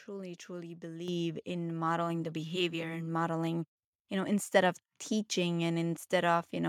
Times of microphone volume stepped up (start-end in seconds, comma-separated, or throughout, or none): 1.08